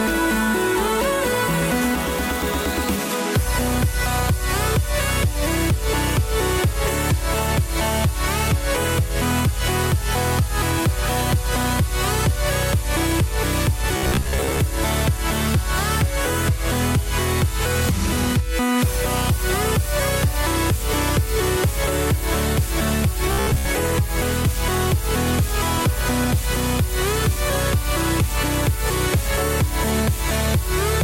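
From 13.97 to 14.60 s and 23.32 to 23.68 s comes robotic sound from repeated short buffers, a rigid 66.7 Hz buzz, likely from a 15 ms segment looped while roughly half, then most, of the audio was skipped. Unlike plain dropouts, the sound never goes silent.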